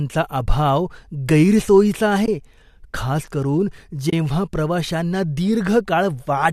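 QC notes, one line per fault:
2.26–2.28 s and 4.10–4.13 s, AAC frame loss with muting: two short soft-edged gaps, about 20 ms and 30 ms long, which fits two and then three missing frames of roughly 10 ms each. The decoder fills each lost frame with silence, and the overlapping transform windows fade the sound out and back in across the gap, so each one is a brief hollow dip. The frame size points to the likely cause, a low-delay AAC stream, whose coding texture is light.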